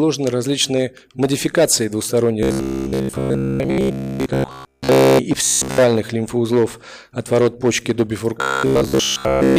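Robotic sound from repeated short buffers occurs at 2.43 to 5.19 s, 5.45 to 5.78 s and, less completely, 8.41 to 9.58 s. A rigid 66.7 Hz buzz, likely from one 15 ms chunk looping, is imposed, unlike dropouts, which leave silence or gaps.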